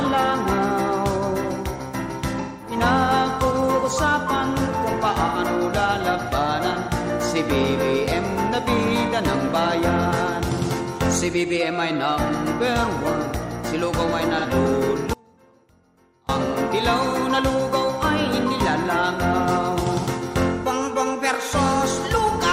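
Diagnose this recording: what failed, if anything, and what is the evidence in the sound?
AAC frame loss with concealment at 2.40–2.76 s, 5.26–5.38 s and 14.39–14.46 s: codec and network stage. Missing frames, about 213, 85 and 43 ms, are patched from the last good spectrum, giving brief smeared, phasey patches rather than clean gaps.

Audio dropout to a faint residue from 15.14 to 16.29 s: the signal cuts abruptly for about 1.15 s, leaving only faint sound roughly 30 dB down. The likely cause is a break upstream while the path after it stayed live.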